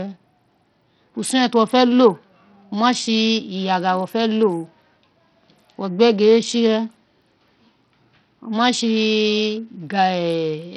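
Bluetooth SBC compression runs through the whole clip. It is the likely cause of the damage heard. The speech has no content above 14.2 kHz, and what treble remains flickers in and out, with a gritty, grainy noise and aliasing riding on the sound. The encoder splits the signal into a few wide sub-bands and has too few bits for them, so the upper bands are starved and the lower ones are coarsely quantised. The heavy damage fits a low bitrate of around 64 kbps.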